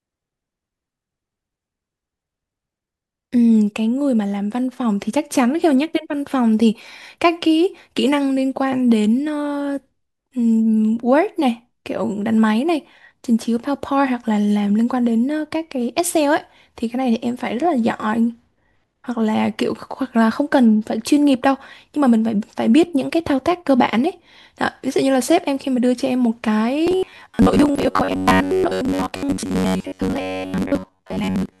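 From 26.87 s to the end at 31.6 s, the speech takes on robotic sound from repeated short buffers: a rigid, metallic buzz near 93.8 Hz that loosely tracks the words. This likely comes from a roughly 10.7 ms block replaying while most incoming audio is skipped.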